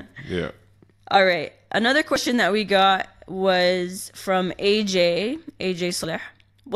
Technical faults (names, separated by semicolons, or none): dropped buffer (overrun)